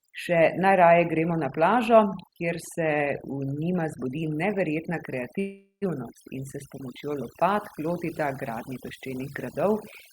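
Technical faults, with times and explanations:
Throughout: overdone noise removal. The noise suppressor is set too aggressively, pushing individual frequency bands down or off whenever they sit near its noise estimate. The background drops and breaks up into twinkling specks, and quieter parts of the speech are stripped along with it.
5.39–5.84 s: call audio freeze. The last sound carries on and fades, then falls silent for about 120 ms before the speech resumes from where it stopped. Nothing is lost, but everything after arrives about 0.42 s later. The likely cause is delayed packets emptying the jitter buffer.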